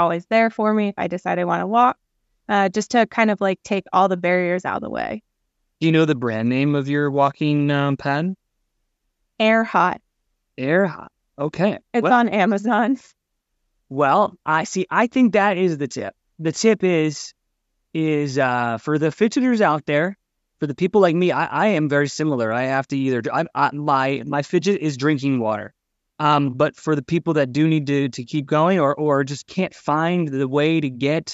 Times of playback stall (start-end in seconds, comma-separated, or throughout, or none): none